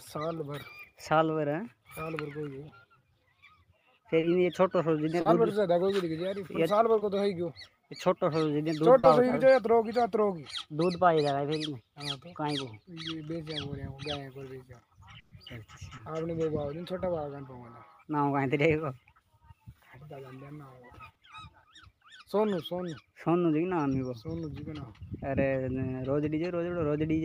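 Short concealed packet loss first appears at 4.19 s, then at 5.21, 6.99 and 8.99 s. Each time, 20 to 40 ms of audio failed to reach the decoder in time, and the receiver covered the hole by extending the preceding sound before blending back into the real signal. The result is a brief smear or wobble. At 4.19, 5.21 and 8.99 s the gap is 40 ms, and at 6.99 s it is 20 ms.

A burst of packet loss follows at 15.19 to 15.33 s. About 120 ms went missing in one run, which is long enough that the concealment is heard as a sustained continuation of the last sound, decaying in level, rather than a brief smear. The audio then picks up later, with the intervening material gone and no silent gap.

Short concealed packet loss returns at 15.97 s and 21.13 s, each about 20 ms, as brief smears.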